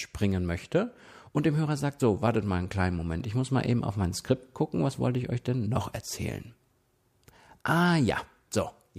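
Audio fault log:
2.00 s, overlap between stream segments: a tiny skip just before "so wartet mal einen", where the speech jumps slightly. Overlapping time stamps at a segment boundary, consistent with 4-second segments, caused about 6 ms of real audio to be trimmed, leaving a waveform discontinuity.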